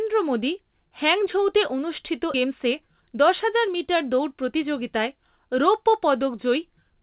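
A speech recording carried over a G.711 mu-law call path, with band-limited audio showing no energy above 4 kHz, contains two faults. At 2.34 to 2.36 s there is a skip ahead: roughly seven tenths of a second of speech is dropped with no fill, so playback leaps forward. On a waveform the two sides butt together almost seamlessly, and a spectrogram shows formant tracks jumping abruptly. From 2.43 to 4.56 s a jitter buffer speed-up follows. The receiver trims pitch-period-sized slices, about 150 ms in all, so the speech runs at about 107% speed at unchanged pitch and sounds slightly hurried. A spectrogram shows compressed syllable timing with harmonic spacing preserved.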